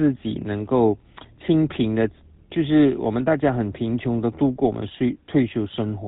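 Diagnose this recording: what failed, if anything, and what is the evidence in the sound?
It's at the codec stage: GSM full-rate coding runs through the whole speech clip. Nothing survives above 4 kHz, and a plainly audible buzzy, gravelly roughness points to a 13 kbps stream. The excitation driving the vocal-tract model keeps only every third sample, hence the grit.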